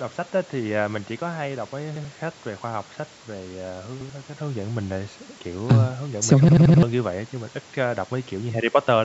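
At 1.96, 4.01 and 5.29 s the speech stutters as a repeated buffer: fresh audio arrived late, so the same 85 ms slice, which fits a 4096-sample buffer, plays twice with a hard join. At 6.49 s it repeats four extra times, a roughly 0.3 s loop. Unlike a dropout's silence or concealment's smeared fill, the identical fragment audibly recurs. The call-style band limit, with nothing above 8 kHz, is unrelated.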